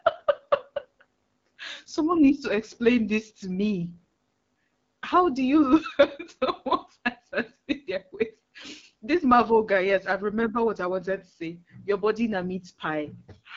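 From start to finish the speech carries the sound of the AMR wideband (HD Voice) codec at a low rate. The codec models speech as pulses driving a vocal tract filter, and here it has too few bits to do that cleanly, so the speech sounds rough and raspy, a degradation consistent with 8.85 kbit/s, one of the two lowest modes. Nothing is present above 7.1 kHz, and the top band is filled with shaped noise rather than real detail.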